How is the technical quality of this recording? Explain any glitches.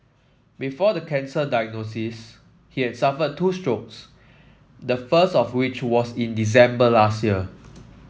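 There's one real glitch: from 4.88 to 7.53 s you get automatic gain rising. The call's AGC decided the input was too quiet and gradually cranked its gain by about 6 dB, so the speech and the background noise swell up together over those couple of seconds. The call's microphone processing also trims the lowest bass, and nothing comes through above 8 kHz.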